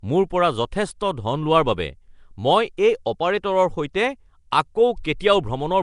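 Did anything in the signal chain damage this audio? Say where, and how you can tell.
Yes. Throughout, the speech sounds hissy and underwater, with nothing above 10.6 kHz. That points to the codec stage, likely Nellymoser compression, which fills bands it gives no bits with noise.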